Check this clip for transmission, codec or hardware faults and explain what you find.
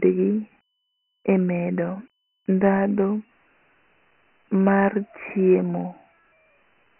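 One codec fault runs through the whole clip. Dialogic VOX ADPCM: heavy 4-bit adaptive quantisation leaves gritty hiss riding the speech, and nothing above 3 kHz, which fits 6,000 samples a second (24 kbps). That cut is lower than ordinary 3.4 kHz telephone band.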